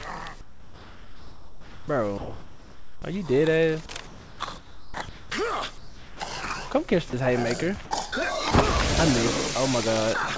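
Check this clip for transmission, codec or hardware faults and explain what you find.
Two kinds of voice-detector fault appear, heard through a call path that carries nothing above 8 kHz.

Sound dropped by the voice detector, at 0.41–1.88 s, 2.18–3.02 s, 5.78–6.20 s, 7.10–7.13 s and 7.85–7.91 s: the sender's detector likely judged quiet sound as background and stopped transmitting. Steady synthetic comfort noise fills each gap until the sound returns.

Sound chopped by the voice detector, at 3.86–5.30 s: here the detector likely toggled transmission repeatedly. About 0.93 s of that stretch becomes comfort noise, so the sound breaks up with two or more holes.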